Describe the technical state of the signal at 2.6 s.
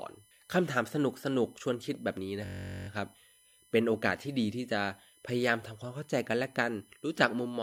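At 2.6 s the computer or audio driver has stalled in a system hang loop running from 2.45 to 2.88 s. The sound hardware keeps replaying the same ring buffer, a 21.33 ms slice that fits a 1024-sample buffer. That fragment of speech repeats about twenty times at 46.9 Hz, so the loop is heard as a steady low buzz near 47 Hz, with no speech lost once playback resumes.

Underneath, and present throughout the clip, is USB whine. Current drawn by the USB bus in 1 ms frames is leaking into the audio through the power or ground path, producing a fixed-pitch tone built on 1 kHz, with its strongest harmonic at 10 kHz. It sits around 35 dB below the speech and is heard as a thin, constant high whine alongside the buzz.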